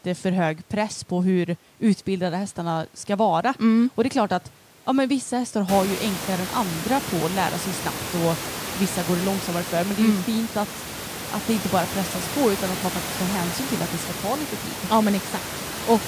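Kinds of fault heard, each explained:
Nothing stood out on listening; the room's background noise grows noticeably louder from about five and a half seconds in, but it stays well below the speech and belongs to the recording itself.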